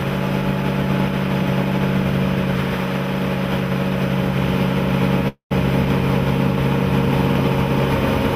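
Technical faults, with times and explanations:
5.28–5.53 s, call audio freeze: the sound stalls for about a quarter of a second. The last bit of audio is stretched into a fading buzz that drops to silence for around the final 110 ms, then picks up exactly where it left off, with nothing lost. Packets were likely held up in transit and the jitter buffer ran dry, so the receiver padded the wait, and everything after it lands 226 ms later.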